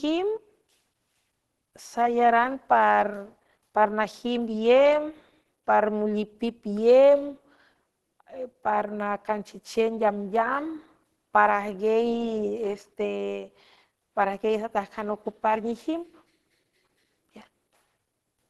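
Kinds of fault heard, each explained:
Opus compression: All through the speech, nothing survives above 12.1 kHz, so the top end stops short. The damage is plainly audible. The sound comes out grainy and rough rather than swirling. The voice also carries a muffled, hoarse edge. That blend fits Opus running in its hybrid mode, with speech coding in the lower bands and filled-in bands above. The cause is likely a low bitrate, around 16 kbps, leaving too few bits for detail.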